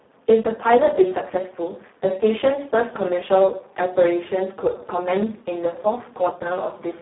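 A speech recording with heavy Speex codec damage all the way through: the voice sounds hoarse, buzzy and close to robotic, which fits a very low setting of about 4 kbps, and it's squeezed into a 200 Hz to 3.5 kHz phone band, with nothing above 3.9 kHz.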